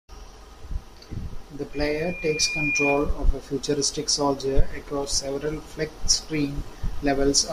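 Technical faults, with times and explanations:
1.73 to 3.10 s, loudspeaker feedback squeal: the microphone was picking up the loudspeaker it was driving, and at 2.4 kHz the round-trip gain rose above one, so that frequency kept reinforcing itself on each pass through the loop. A single steady tone rises out of the speech, swelling over roughly a second until it sits about 5 dB above the talker, then stays as a piercing whistle until the loop is broken.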